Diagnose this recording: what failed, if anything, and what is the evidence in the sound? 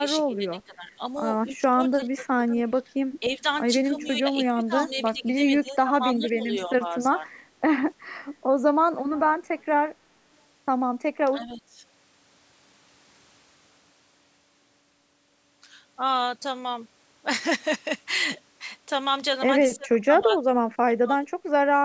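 The failure is in the call processing stage. At 0.0–0.92, 1.57–2.55, 3.2–3.47, 3.89–7.28, 11.26–11.8, 19.75–20.39 and 20.85–21.22 s the speech dips, by about 10 to 25 dB. This is speech suppressed in double talk, likely the echo canceller ducking its own talker while the far side spoke. Unlike packet loss, the level sags and recovers with no concealment artefacts, within the 8 kHz band of the call microphone processing.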